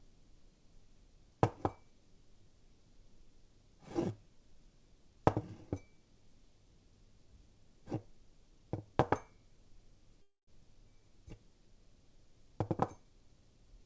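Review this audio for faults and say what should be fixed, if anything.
From 10.22 to 10.50 s there is a call audio freeze. The last sound stretches into a fading buzz, goes silent for about 150 ms, then resumes where it stopped. This is likely delayed packets draining the jitter buffer, adding a 255 ms gap without losing any audio. Prevent this with a steadier network route or a larger minimum buffer depth.

From 13.59 s to the end, a jitter buffer speed-up makes the sound run about 13% fast at unchanged pitch. The receiver trimmed roughly 40 ms in short pitch-period slices to shed backlog. Prevent it with smaller delay swings, so the buffer rarely overfills and needs less aggressive time compression.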